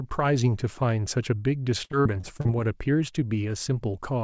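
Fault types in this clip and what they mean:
Repeated packet loss (robotic sound): from 1.84 to 2.51 s speech breaks into a run of short holes, the longest 57 ms, each filled by extending the previous sound, so about a third of that stretch is patched over. Unlike a single dropout, the patches recur in quick succession.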